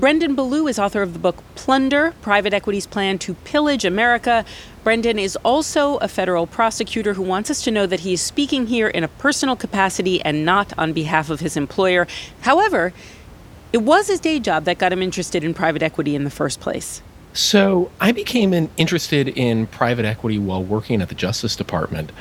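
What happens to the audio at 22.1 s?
Nothing goes wrong at 22.1 s: the speech there is intact, with only the room's own background noise, about 23 dB below the speech, sitting underneath it as part of the recording.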